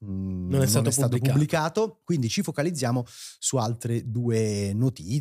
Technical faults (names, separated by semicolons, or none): none